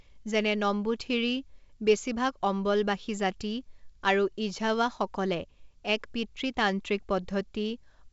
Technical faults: none

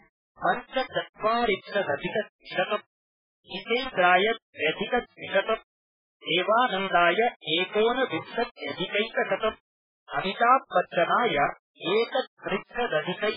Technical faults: low bit depth without dither; MP3 compression

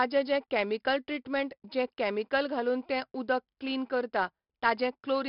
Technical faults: 4-bit ADPCM compression

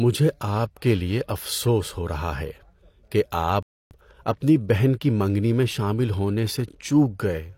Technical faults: rebuffering stall

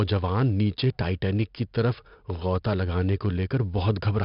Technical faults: 4-bit ADPCM compression

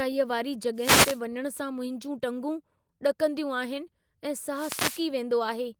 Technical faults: wireless microphone noise hit

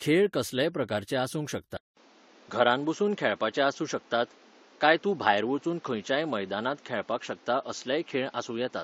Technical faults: transcoding between lossy codecs; input switched to a poorer device

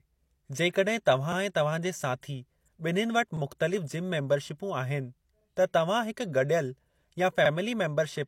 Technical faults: pre-echo; overlapping chunks

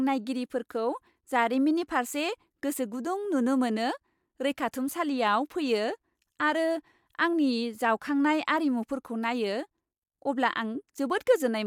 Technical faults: none

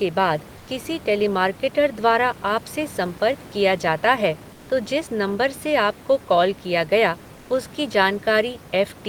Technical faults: comfort noise in place of the background

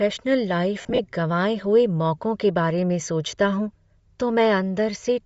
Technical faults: Bluetooth LC3 compression; lost LE Audio frames

